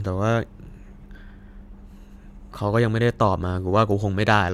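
Speech recording with no technical faults to report. Nothing in it calls for a time or a cause.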